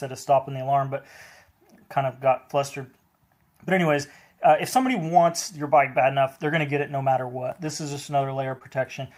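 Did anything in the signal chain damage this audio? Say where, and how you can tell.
Yes. The damage is in the network stage: nine lost packets were rebuilt from error correction between 7.63 and 8.63 s. Each 20 ms stretch was replaced by the low-bitrate copy carried in the following packet. There is no gap, but those frames sound rougher and grainier. On a spectrogram they show as short, smeared, noisier columns in clusters.

Also at the network stage, a short concealed packet loss runs from 8.59 to 8.63 s. About 17 ms of a missing 20 ms was synthesised by extending the preceding sound and then crossfading back. It is heard as a brief smear or wobble, and the waveform shows a blended patch.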